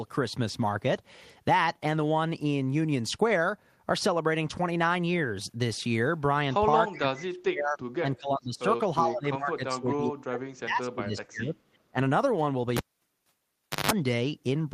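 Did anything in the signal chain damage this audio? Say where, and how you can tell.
Yes. Call processing most likely let an echo leak through: the far end's echo canceller missed a scrap of loudspeaker pickup and sent it back. From 6.95 to 7.0 s a faint delayed copy of the speech returns about 377 ms late, roughly 20 dB below the talker.

The same call processing also shows speech suppressed in double talk, likely from the canceller mistaking overlapping talk for echo and attenuating everything. The talker dips at 6.98–7.78 s (nearly 40 dB down), 7.99–8.65 s, 9.02–11.75 s and 11.91–11.98 s (roughly 20–30 dB down).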